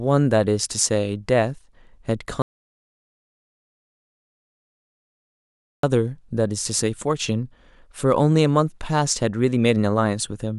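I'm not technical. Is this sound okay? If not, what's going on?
No. The speech stops dead at 2.42 seconds and only comes back at 5.83 seconds. This is an audio dropout to silence. For about 3.4 seconds there is nothing at all, not even the faint background hum of the room. The recording kept running, but no sound was reaching it. The likely cause is a loose microphone, a broken connection, or a mute pressed by accident. Whatever was said in that gap is lost.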